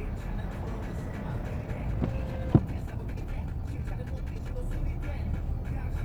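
From 1.56 to 4.56 s there is a time-stretched section: the audio runs 1.58 times faster while its pitch holds steady, likely from software squeezing the passage by dropping short pieces. It sounds rushed, and unlike a plain speed-up, nothing rises in pitch.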